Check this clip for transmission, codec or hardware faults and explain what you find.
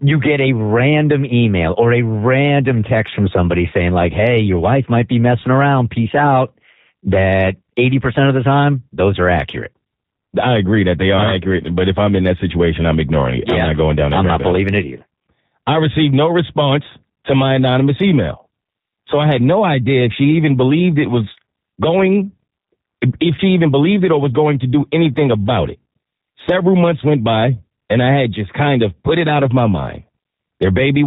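Two faults are audible. Throughout, the G.729 codec damage is plain: band-limited to 4 kHz, rough and synthetic, as an 8 kbit/s model-based coder rebuilding speech from filter and pulse parameters produces. From 23.35 to 23.41 s, VoIP packet loss concealed by the speech codec: about 30 ms is missing, fitting one lost packet, and the decoder extrapolates a fading buzzy tone or coloured noise, and the voice stays weak or distorted afterwards.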